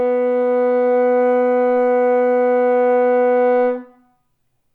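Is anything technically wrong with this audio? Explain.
No, nothing technically wrong can be heard here.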